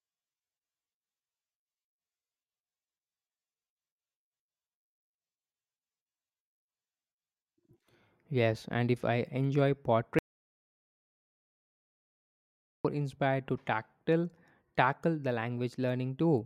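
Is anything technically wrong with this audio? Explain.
Yes. From 10.19 s to 12.85 s there is an audio dropout to silence: the input was likely lost, through a disconnection or mute, while recording continued writing zeros. The speech cuts off mid-flow into about 2.66 s of total silence, with no room tone, then resumes abruptly.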